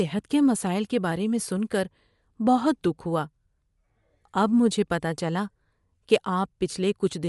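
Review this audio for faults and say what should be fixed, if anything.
Throughout the speech, nothing is present above 11.6 kHz, and the upper band sounds breathy and grainy. This is likely Bluetooth LC3 compression, at a rate that fits 48 kbps with 10 ms frames. A spectrogram would show a flat ceiling with speckled, noise-filled patches below it. Record over a wired or lossless path, or raise the LC3 bitrate, to avoid it.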